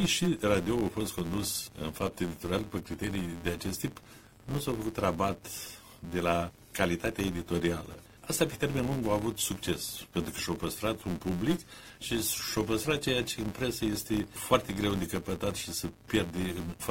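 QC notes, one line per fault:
Throughout: filter restarted on every block. There's a steady buzz at 172 Hz riding under the audio, getting louder and quieter with the signal. It fits 256-sample blocks at 44.1 kHz, with the filter wiping its memory each block and kicking off a tiny transient every time.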